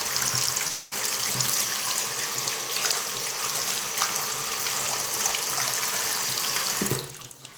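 Everyday sound here, and there's one glitch early on. From 0.67 to 0.93 s the real audio stops and the gap gets papered over with a smeared, fading buzz carried on from whatever was playing just before. It never drops to true silence, because the whole 240 ms is concealment. When the sound picks back up at 0.93 s, that quarter second is simply gone. That's likely a long network dropout, with the receiver's concealment filling the hole.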